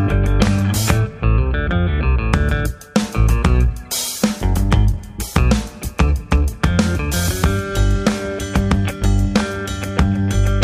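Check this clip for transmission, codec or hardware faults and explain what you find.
Nothing in this clip points to a fault of any kind. There is nothing to report or explain.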